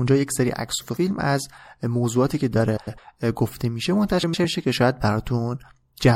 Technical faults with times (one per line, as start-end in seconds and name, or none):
0.00-6.16 MP3 compression
0.81-0.97 frames out of order
2.76-2.99 frames out of order
4.23-4.45 frames out of order